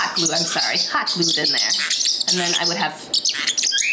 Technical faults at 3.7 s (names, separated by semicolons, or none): gain pumping